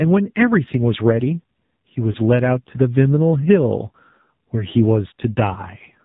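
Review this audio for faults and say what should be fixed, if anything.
The speech is band-limited by the AMR narrowband mobile codec. Nothing above 4 kHz survives, and the voice has a buzzy, synthetic edge, which fits the 7.4 kbps mode. Unlike plain low-pass filtering, the vocal-tract model adds this coarse, pulse-driven texture. Prevent it by capturing or transmitting with a wideband codec at a higher bitrate.

Lost AMR speech frames cause brief warbling dips at 2.12 s and 5.54 s, each about 20 ms long, which points to a single lost frame each time. The decoder bridged each gap by repeating its last good settings at falling gain. A hard dropout would cut to silence instead. Prevent them with a stronger radio link or better channel error protection.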